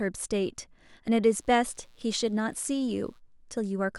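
Mains buzz runs from 1.28 to 3.21 s beneath the speech, a steady, raspy buzz well below the voice. Sharp switching spikes locked to the 60 Hz supply, arriving twice per cycle, leaked into the signal path, spraying harmonics of 60 Hz up into the kilohertz range.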